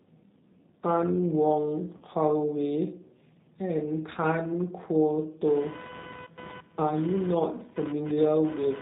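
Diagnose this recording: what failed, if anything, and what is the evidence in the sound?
The codec stage is at fault throughout: G.729 compression at 8 kbit/s. Nothing reaches above 4 kHz, and the speech has a plainly audible rough, synthetic edge from pulse-based excitation. Plain band-limiting would only sound dull, without this buzzy graininess.

The network stage shows VoIP packet loss concealed by the speech codec, from 1.97 to 2.05 s. About 40 ms of audio went missing, consistent with four lost 10 ms frames. Instead of a silent gap or click, the decoder stretches the last sound into a fading buzzy tone or coloured noise, and the speech recovers weakly afterwards.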